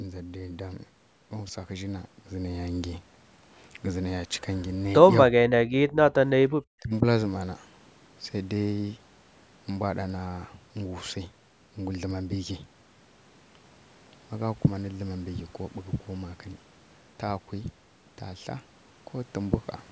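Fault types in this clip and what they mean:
Speech suppressed in double talk: with both ends talking at once, the echo canceller likely failed to tell this talker apart from loudspeaker echo and turned the outgoing signal down. The speech sinks three times between 5.3 and 7.03 s. The first is a very deep cut of around 40 dB from 5.3 to 5.91 s, then a brief near-dropout at 6.35–6.39 s, then a shallower dip of about 15 dB from 6.8 s.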